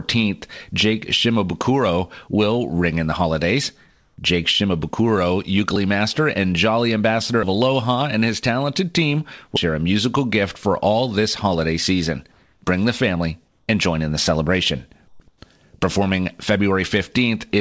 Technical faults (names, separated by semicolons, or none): comfort noise in place of the background; dropped buffer (overrun)